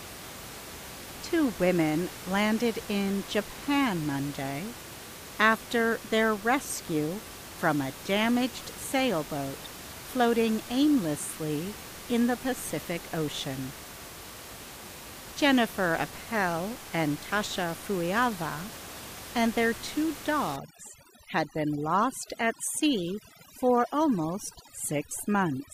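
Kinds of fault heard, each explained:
Overdone noise removal: from 20.56 s to the end, a noise reducer set too hard pulls frequency bands down whenever they sit near its noise estimate. The room noise, about 15 dB under the speech, drops and breaks up into twinkling specks.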